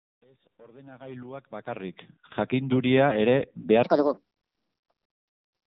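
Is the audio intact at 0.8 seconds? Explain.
No. At 0.8 s, as throughout, the speech carries AMR narrowband mobile codec damage: nothing above 4 kHz, with a buzzy, synthetic vocal-tract model that fits a low bitrate near 7.4 kbps, all under the gentle fade-in. A plain low-pass filter would muffle the sound without adding that buzz.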